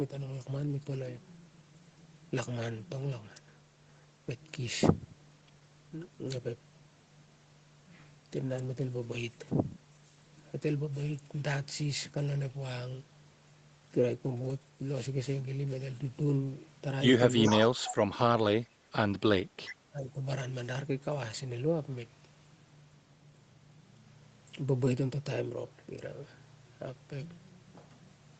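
Echo leak at 17.42 to 17.65 s: a copy of the speech comes back 403 ms late, only slightly quieter than the talker. A far-end echo canceller likely let its loudspeaker pickup through. Much fainter scraps with the same 403 ms delay follow at 19.66 to 19.74 s and 20.05 to 20.11 s.

Speech suppressed in double talk from 17.51 to 18.46 s, at 18.69 to 18.75 s, and from 19.52 to 20.21 s: the voice drops sharply, by roughly 30 dB, then about 10 dB, then about 25 dB. The likely cause is the canceller hearing both sides at once and turning the talker down along with the echo.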